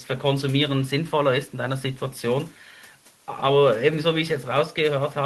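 No technical faults can be heard anywhere in the recording; the speech signal comes through intact, with no interruptions, distortion, dropouts or glitches at any point.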